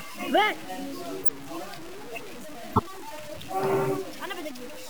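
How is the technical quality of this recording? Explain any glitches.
The recording has poor technical quality, with constant graininess and two short bursts.

Low bit depth without dither runs through the whole clip. The grain follows the sound itself. Quiet passages turn gritty. The error sits only about 15 dB below the signal. This fits plain truncation to roughly 5 bits, likely with no dither added.

A corrupt frame decoded shows up twice. The first is at 1.23 to 1.29 s, and the second at 2.70 to 2.80 s. Each is a brief burst of misplaced energy. The decoder played damaged data, a couple of frames, then a few. The first burst is louder, near -5 dBFS.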